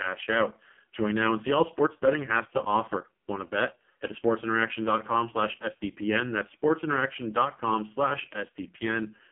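From start to finish the speech runs through the AMR narrowband mobile codec. Everything sits between about 150 Hz and 3.4 kHz, with nothing above 3.7 kHz. The heavy buzzy, synthetic coding fits the lowest 4.75 kbps mode, where too few pulses per frame rebuild the voice.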